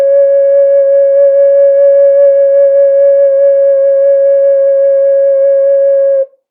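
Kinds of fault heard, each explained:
No faults of any kind can be heard in this piece of music. There is nothing to list or explain here.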